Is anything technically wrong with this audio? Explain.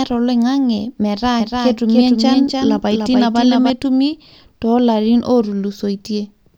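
Yes. From 1.40 to 3.70 s there is a doubled audio track: a second full-band copy of the speech trails by roughly 300 ms at around 5 dB lower. It is likely captured again via a slower path. It starts and stops abruptly, with no decay. On a spectrogram, each pattern reappears about 5 dB weaker, shifted right.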